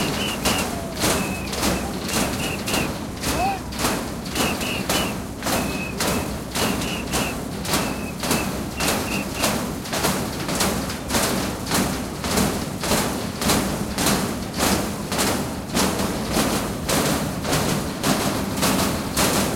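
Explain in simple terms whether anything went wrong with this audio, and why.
From 15.99 s to the end, the audio was most likely picked up a second time through a slower path and mixed back in. The result is a doubled audio track: a noticeably quieter copy of the same sounds trails about 0.15 of a second behind, starting abruptly and giving everything a flat, stuttering echo.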